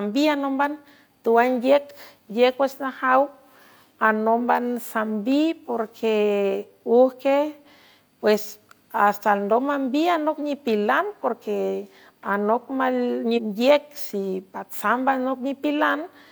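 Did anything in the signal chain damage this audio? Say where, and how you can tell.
Yes. At playback, a stream segment was skipped, likely because one segment failed to load. At 13.33 to 13.39 s the speech jumps ahead with a brief blip.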